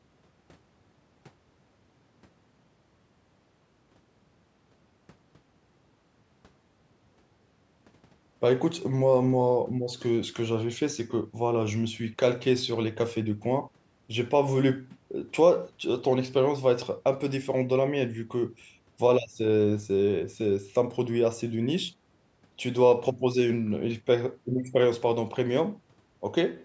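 Nothing stood out on listening to this speech, which carries the usual bass roll-off and 8 kHz ceiling of call microphone processing.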